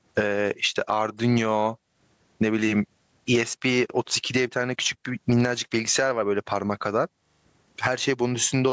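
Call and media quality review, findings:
Gain pumping, throughout the speech. Likely cause: mic input gain set far too high, with a fast limiter or compressor clamping down on each loud sound. Gain swings by around 20 dB; loud and soft parts squashed together. The call's mic processing band limit at 8 kHz is normal.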